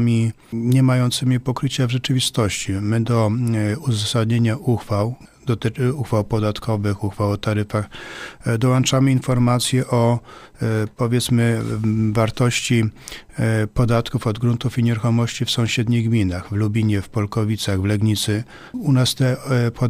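No technical faults can be heard anywhere in the audio.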